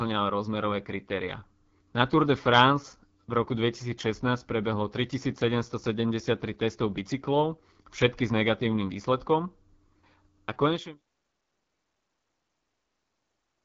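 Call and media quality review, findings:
AMR wideband (HD Voice) codec throughout: rough, raspy speech with nothing above 7.3 kHz. Fits AMR-WB at 8.85 kbit/s, too low for clean speech. Intended fade-out finishes at 11.01 s.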